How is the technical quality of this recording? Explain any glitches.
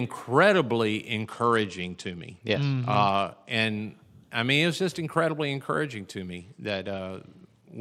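The speech has two stretches of degraded Bluetooth audio. From 1.22 to 3.51 s, and again from 6.37 s, just after "just incredibly encouraging to", through to the end, there is a Bluetooth SBC bit pool drop. The link appears congested, and the encoder cut its bit allocation to a rate consistent with about 90 kbps. The upper sub-bands were starved and the rest coarsely quantised, so the treble dulls and gritty noise appears.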